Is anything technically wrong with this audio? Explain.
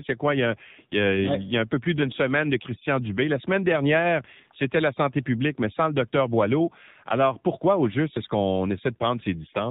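Yes. Throughout, the speech carries AMR narrowband mobile codec damage. Nothing above 4 kHz survives, and the sparse pulse-driven vocal-tract model makes it plainly buzzy and synthetic, which fits a low mode near 7.4 kbps.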